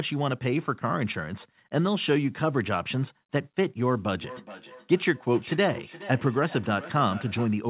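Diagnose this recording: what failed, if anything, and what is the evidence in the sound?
Feedback echo between two devices, 4.12 to 7.59 s, call processing: the speech returns roughly every 400 ms, peaking about 16 dB below it. A second nearby device replays this microphone's signal, which is picked up again, and no canceller removes it.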